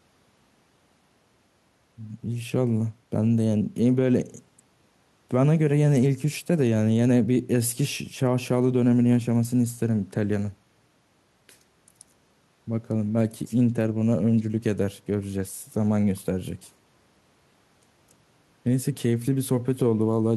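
No technical faults can be heard anywhere in this speech recording. Nothing interrupts or disturbs the signal at any point.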